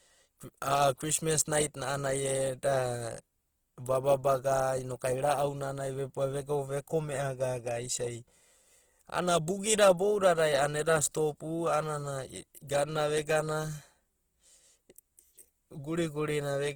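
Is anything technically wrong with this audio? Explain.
Yes. Throughout, the speech is rough and grainy, likely from low-bitrate Opus compression in its music mode, which fits about 16 kbps and fills starved bands with noise. At 12.67 s there is pre-echo: the codec spreads noise across its whole block, so a brief hiss of about 17 ms precedes a sharp attack and softens it.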